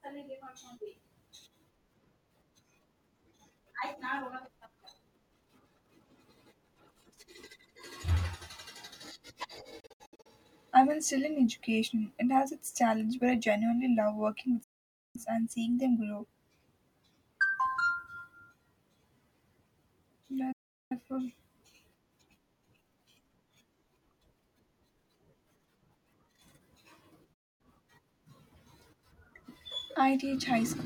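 Digital broadcast dropouts at 9.80–10.26 s (broken into short holes), 14.63–15.16 s, 20.52–20.92 s and 27.34–27.61 s: the receiver lost frames and muted, so the sound snaps to silence and what was sent there is gone.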